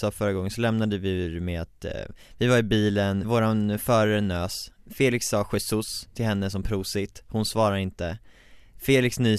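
No technical faults can be heard anywhere in the recording, which carries its speech steadily and without interruption.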